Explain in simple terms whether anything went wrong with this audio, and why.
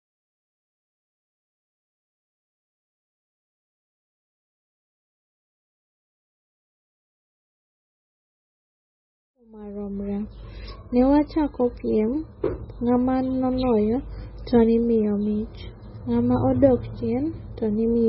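The speech sounds dull and muffled from start to finish, with nothing above about 5.6 kHz, and has a watery, swirly quality with metallic chirps on s sounds. That is likely heavy MP3 compression, which cuts the treble and drops quieter detail to save space. The gentle fade-in ending at 10.71 s is a normal edit.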